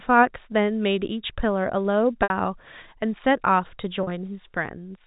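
At 2.23 s there's a dropout of about 70 ms, patched by packet loss concealment with pitch repetition. The receiver loops the last pitch period to cover the gap, so you hear a brief held, buzzy tone before the speech picks up at 2.3 s. At 4.03 s it happens again: 50 ms lost, scattered across 80 ms with a longest run of 40 ms, giving a shorter stuttery buzz. All of it sits in G.711 telephone coding, band-limited below 4 kHz.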